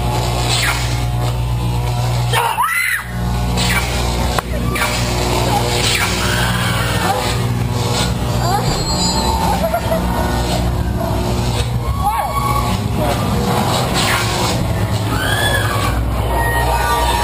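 At 4.75 to 4.77 s the sound lurches forward with no gap, as though about 0.7 s had been cut out and the two sides spliced together. This is a skip ahead: a stretch of audio was dropped, in transit or by an overflowing jitter buffer, and playback jumped straight to audio already waiting.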